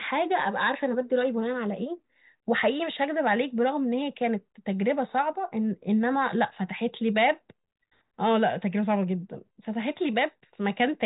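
No technical faults can be heard anywhere in the speech. The G.726 ADPCM path at 40 kbit/s leaves at most a faint trace of coding damage, and nothing above about 3.8 kHz comes through.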